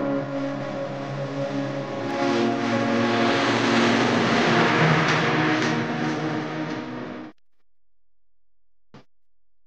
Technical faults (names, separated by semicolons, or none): doubled audio track